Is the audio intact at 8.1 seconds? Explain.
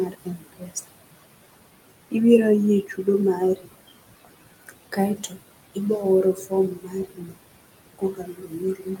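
No. At 8.1 seconds the sound falls inside a stretch of speech cut by the noise suppressor, running from 7.98 s to the end at 9.0 s. The suppressor mistook speech for background and turned it down, by about 21 dB at worst. The speech there sounds faint and swallowed.

Noise suppressor artifacts also run through the whole clip, including this moment. The suppressor lowers the bands it judges to be steady noise by about 20 dB, frame by frame. The room noise, about 13 dB below the speech, pumps between phrases.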